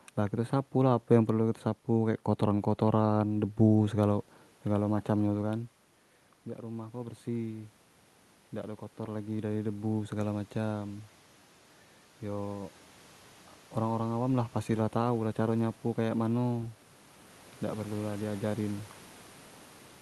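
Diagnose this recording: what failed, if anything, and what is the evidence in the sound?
Call processing's automatic gain rising: detecting input about 12 dB quieter, it raised gain roughly 4 dB from 8.61 to 11.12 s, so speech and room noise swell together.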